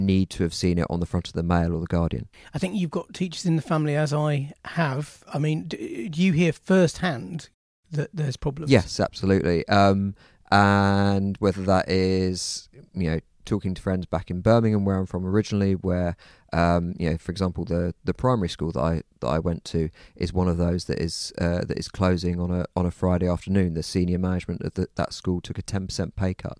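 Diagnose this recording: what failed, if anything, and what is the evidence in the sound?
Nothing in the speech stood out on listening as a fault at any stage of the chain.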